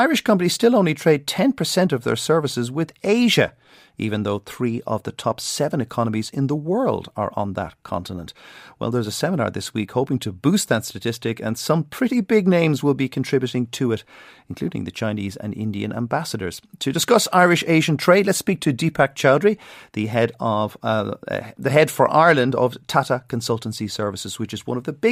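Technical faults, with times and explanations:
Listening through this speech recording, nothing stood out as a technical fault.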